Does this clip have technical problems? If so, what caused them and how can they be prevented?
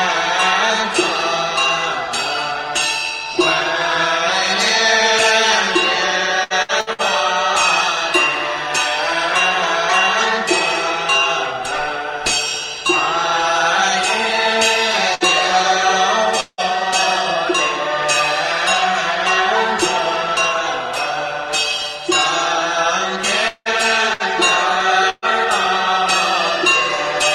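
Yes. Between 6.43 and 7.01 s the sound turns choppy and robotic, breaking up four times in quick succession, with the longest break about 68 ms. This is repeated packet loss (robotic sound). Packets kept going missing or arriving late. Each time, the receiver stretched the last fragment it had to cover the hole, so almost half of that stretch is patched sound and about 240 ms of real audio never plays. Prioritising the audio traffic (QoS) and using a wired link instead of congested Wi-Fi would prevent it.

Three shorter hiccups are each a burst of packet loss. At 15.14–15.23 s and 24.13–24.23 s the sound briefly smears into a held, fading tone, with about 60 ms missing each time. At 25.10–25.25 s the smear lasts longer and ends in a brief silence before the sound resumes, with about 120 ms missing. In each case a run of consecutive packets was lost, and the receiver extended and faded the last sound until real audio arrived again. 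Forward error correction or a slightly deeper jitter buffer would prevent them.

At 16.40–16.61 s and again at 23.48–23.68 s, the sound hangs on a fading buzz or hiss for under two tenths of a second, drops to a moment of silence, and then resumes further on, each time with about 180 ms gone. These are long network dropouts, where the stream likely stopped arriving altogether and the concealment ran out before packets returned. A more stable connection with redundant audio packets would prevent them.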